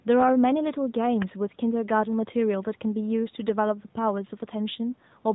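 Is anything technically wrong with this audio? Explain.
Yes. The speech has passed through an AMR narrowband mobile codec, and the damage is plainly audible across the whole clip. AMR-NB samples at 8 kHz, so the voice is cut off at 4 kHz and sounds muffled and telephone-like. It then rebuilds each 20 ms frame from a vocal-tract model driven by a handful of pulses. The result has a buzzy, synthetic edge, consistent with a mid-range mode of about 10.2 kbps. The call microphone processing's removal of the deepest bass is separate and expected.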